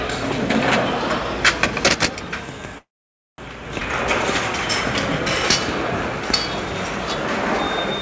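From 2.78 to 3.41 s there is a call audio freeze: the last sound carries on briefly, then about 0.53 s of silence, likely from delayed packets draining the jitter buffer. Playback then resumes where it stopped.

At 3.80 to 3.84 s a skip ahead follows. Roughly a fifth of a second of audio is dropped and the two sides are spliced together almost directly, giving an abrupt forward jump.

Throughout, the G.722 call path leaves nothing above 8 kHz.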